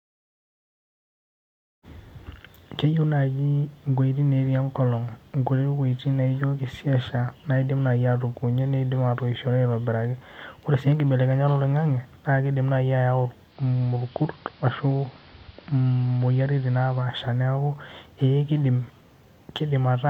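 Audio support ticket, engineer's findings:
Digital radio blending to analogue, 13.46 to 17.11 s. Hybrid receiver lost the digital stream and cross-faded over about 135 ms to the AM feed. Level drops about 1 dB, hiss sits roughly 30 dB down.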